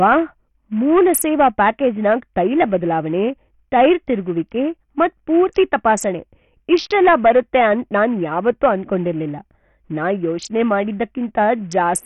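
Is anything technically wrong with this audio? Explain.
Yes. Throughout, this speech sounds like heavily damaged Bluetooth SBC compression, likely the cause. The treble flickers and thins, with nothing above about 14.8 kHz. Gritty noise rides on the voice. That fits a low bit pool near 48 kbps. The weak top sub-bands get starved of bits.

Hard clipping occurs at 0.93 to 2.76 s, 3.75 to 3.93 s, 6.72 to 8.05 s and 8.48 to 8.70 s, just before "ಅನ್ಕೊಂಡಿರಲ್ಲಿಲ್ ನಾ ಯೋಚನೆ". The signal overdrives by about 4 to 8 dB. Its peaks are cut flat. This adds harsh high harmonics, heard as crackle or fuzz on loud peaks.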